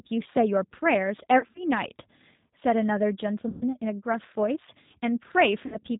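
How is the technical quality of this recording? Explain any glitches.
The technical quality is poor. The speech has passed through a low-bitrate voice codec throughout, and three short dropouts are covered over by the decoder.

Throughout, the G.729 codec at 8 kbit/s rebuilds the speech from a vocal tract model, a pitch predictor and a few pulses per frame instead of the real waveform. Nothing above 4 kHz survives, so the speech sounds muffled, rough and plainly synthetic.

VoIP packet loss concealed by the speech codec occurs at 1.39 to 1.65 s, 3.49 to 3.64 s and 5.66 to 5.77 s. When packets failed to arrive, the decoder extended its last pitch and filter settings and faded them out. The first gap is broken up over about 160 ms, and the second loses about 120 ms. Each stretches the speech into a buzzy tone or coloured noise that fades, and takes a moment to recover.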